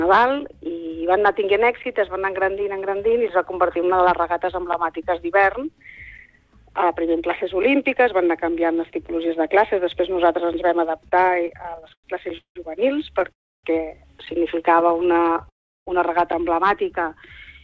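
From 11.04 to 12.57 s there are repeated stalls (stutter): packets kept arriving late, and the jitter buffer ran dry 19 times. The receiver stretched the last sound across about 0.48 s, with the longest stretch 179 ms, so the audio drags and hiccups. At 13.32 to 13.65 s there's a call audio freeze: the sound drops to near silence for about 0.3 s, then resumes where it left off, likely from packets held up in transit. From 14.72 to 15.48 s there's a lighter stutter, 12 tiny gaps of no more than 12 ms each. Another freeze follows at 15.49 to 15.89 s, going silent for about 0.35 s.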